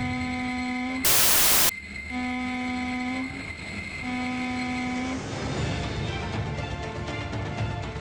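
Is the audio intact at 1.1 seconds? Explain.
No. From 1.05 to 1.69 s, loud noise buries a slowed, octave-lower sound: a wrong sample width, with bytes misgrouped and played at half speed, fitting 32-bit data read as 16-bit.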